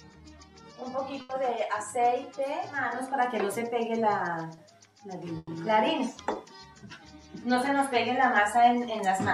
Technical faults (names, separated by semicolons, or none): burst of packet loss; short concealed packet loss